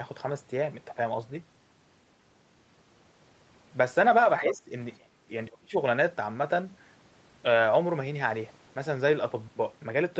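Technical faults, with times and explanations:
4.45–4.71 s, 4.98–5.13 s and 5.59–5.74 s: speech suppressed in double talk. The voice dips sharply, by about 15 dB in the first stretch and about 25 dB in the other two, each lasting roughly a fifth of a second or less. The likely cause is an echo canceller that could not separate the near voice from loudspeaker echo while both sides talked, so it turned everything down.
4.48–4.54 s and 5.52–5.57 s: other side's voice leaking through. Short scraps of a second voice surface beneath the talker, about 15 dB below the speech the first time and about 30 dB below the second. This is likely loudspeaker echo that the canceller failed to strip from the microphone signal.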